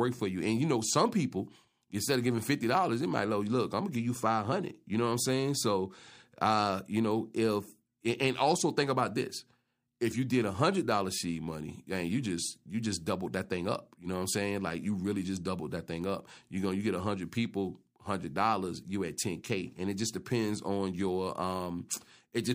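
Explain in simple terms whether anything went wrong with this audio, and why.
Nothing went wrong here; the speech comes through steady and unbroken, with no dropouts, glitches or other faults to point to anywhere in the recording.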